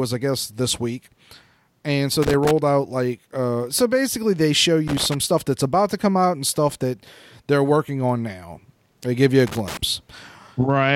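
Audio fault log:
2.22–2.51 s, 4.88–5.14 s, 9.47–9.77 s: loose connector crackle. Irregular bursts of scratchy crackle, each about 0.3 s, after "and so", "so basically they show" and "give you a". A worn contact rapidly breaks and remakes the signal path.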